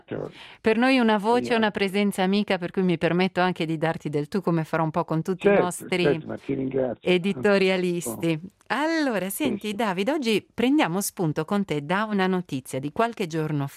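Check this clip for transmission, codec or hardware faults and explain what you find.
Nothing here stands out as a transmission, codec or hardware problem; it all sounds just as it should.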